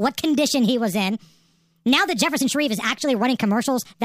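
Speech plays back too fast and too high for its whole length, the signature of a wrong sample rate. The samples are clocked out faster than they were captured, with no resampling, so tempo and pitch rise together by the same ratio: about 1.38 times normal speed and roughly 5.5 semitones sharp. That ratio fits audio recorded at 32 kHz being played at 44.1 kHz, giving the voice a hurried, thin, chipmunk-like quality.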